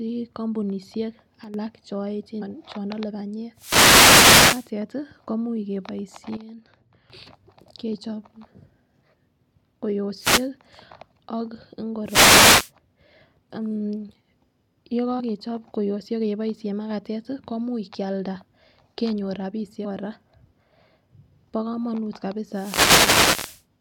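A speech recording with two kinds of fault. There are two sudden gain jumps. From 1.44 to 1.54 s the level drops by about 10 dB, and from 6.37 to 7.10 s by about 12 dB. Speech and background noise fall and recover together, with no ramp. This is likely an untapered digital gain change. Damaged data in a compressed stream shows up as short blips at 2.41, 15.19 and 19.84 s. At each point the decoder misreads corrupted frames, loses sync and resumes at the next frame header.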